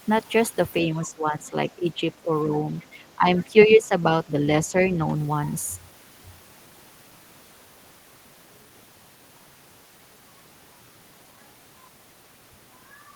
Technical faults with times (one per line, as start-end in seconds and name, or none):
0.88-2.29 speech suppressed in double talk
2.79-2.86 other side's voice leaking through
3.16-3.92 speech suppressed in double talk
4.25-4.38 speech suppressed in double talk
4.66-4.74 speech suppressed in double talk